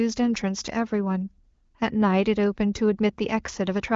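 No technical faults can be heard in this speech recording, which has come through the AMR wideband (HD Voice) codec at a rate consistent with 18.25 kbit/s, so the audio stops at about 7.3 kHz, as that band-limited coding path normally produces.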